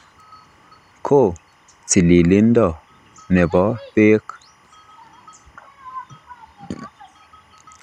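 Speech, with timecode bleed running under the whole clip: a faint chirpy warble flipping between roughly 1 and 2 kHz, about 40 dB down, which is 25 fps LTC leaking in from a neighbouring track or cable.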